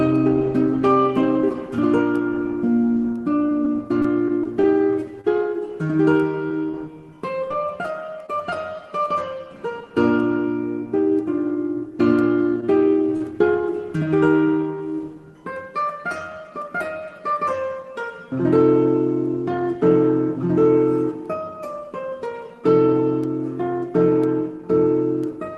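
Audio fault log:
3.49–5.26 s, scattered short gaps: brief ticks and smears, about seven tiny holes up to roughly 30 ms, each filled by extending the last sound after packets went missing.
6.48–8.30 s, scattered short gaps: lighter hiccups, about five holes of roughly 20 ms at most, where lost or late packets were covered by continuing the preceding sound.
12.61–12.64 s and 13.17–13.23 s, short stall from a late packet: a sound is briefly held too long, stretched by 17 ms and then 38 ms, while the jitter buffer ran empty. Playback then resumed in place, with nothing lost.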